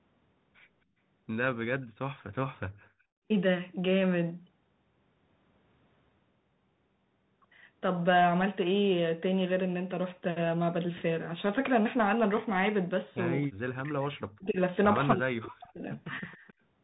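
The whole speech clip carries the Bluetooth CVSD headset codec: everything above 4 kHz is gone, s sounds scratch, and a granular hiss sits underneath, which points to a 64 kbit/s link. From 1.82 to 1.86 s there's a faint echo leak, a copy trailing by 265 ms, roughly 35 dB down, likely a speakerphone's echo canceller missing some pickup. Between 2.81 and 3.28 s the room tone is background gated by the echo canceller, dropping about 37 dB for under half a second before recovering. Speech is suppressed in double talk from 13.46 to 14.59 s and again from 15.15 to 15.92 s, dipping around 40 dB, likely as both sides talk. The echo leak returns from 16.17 to 16.53 s, again 265 ms behind, roughly 30 dB down.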